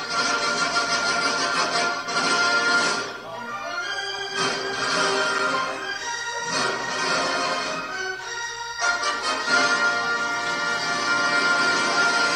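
At 1.65 s the sound drops to digital silence for about 1.45 ms, which fits a 64-sample block. At 5.39 s a longer block of digital silence lasts 5.8 ms, consistent with 256 samples. Each gap is short enough to be heard as a tick or dip.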